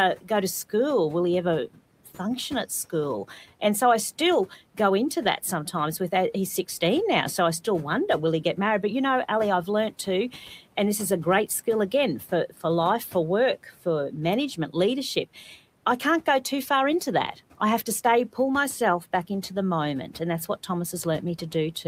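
Right at the start, from 0.21 to 0.3 s, there's speech cut by the noise suppressor: it mistook a soft stretch of the talker for background and pulled it down by about 11 dB, so roughly a tenth of a second sounds swallowed against room noise sitting about 24 dB under the speech.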